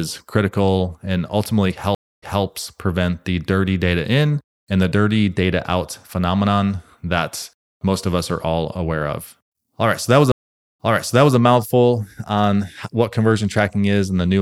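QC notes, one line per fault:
1.95 to 2.43 s, stream reconnect: the speech drops out for about 270 ms, then picks up roughly 0.21 s earlier than where it stopped, so a short stretch is heard twice. The connection broke, the player restarted its decoder mid-stream, and the server resent a burst from slightly behind the break point.
10.32 to 11.37 s, stream reconnect: the same break, with a longer gap of about 470 ms. The speech resumes about 0.58 s earlier, repeating a longer stretch from the resent burst.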